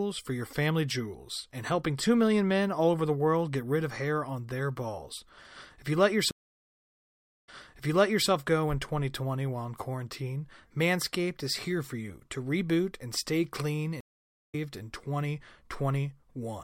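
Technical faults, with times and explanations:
6.31–8.28 s, stream reconnect: the connection dropped after "you let", the player went silent for 1.09 s, then reconnected with a fresh decoder. The server resent a burst, so the audio picks up 0.89 s earlier, repeating material before "go in", with the first frames muted or faded in.
14.01–14.55 s, stream reconnect: after "reboot and stay clean" the link broke again, leaving 0.45 s of silence. The new decoder joined the live stream roughly a third of a second later, so that stretch of sound is skipped.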